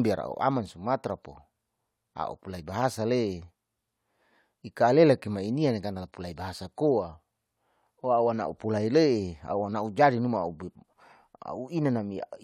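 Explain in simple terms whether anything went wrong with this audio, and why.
Listening to the speech in this recording, nothing stood out as having gone wrong anywhere along the way.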